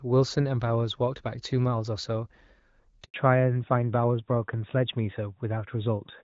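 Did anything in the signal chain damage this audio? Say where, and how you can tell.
Yes. The first fault is a handover gap at the network stage. At 3.04 s the speech fades out within a few tens of milliseconds. It stays silent until 3.14 s, a 100 ms hole. No speech frames reached the decoder while the call moved from one network to the other. Nothing was concealed or repeated. Whatever was said in that tenth of a second is simply gone.

The second fault is a fallback to narrowband, at the codec stage. Up to 3.04 s the speech carries wideband content with only light coding roughness. This fits HD Voice (AMR-WB) near 12.65 kbit/s. From 3.14 s to the end, nothing remains above 4 kHz. The speech turns duller and rougher. That points to the new link running an older narrowband codec, likely AMR-NB at around 12.2 kbit/s.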